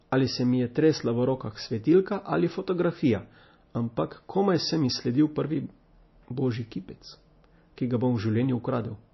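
From start to finish the speech shows plainly audible MP3 compression damage. Nothing is heard above about 5.8 kHz, which fits a low bitrate of roughly 27 kbps. The likely cause is a starved encoder dropping the treble and zeroing weak spectral lines, so the sound turns watery and swirly, with chirpy s sounds.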